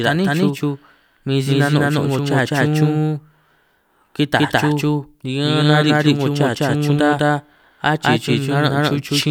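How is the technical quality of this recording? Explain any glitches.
The recording has one clear problem running the whole way through. A doubled audio track: the speech is likely mixed in twice out of step, so a full-strength copy trails about a fifth of a second behind, making a dry, slapback-like echo.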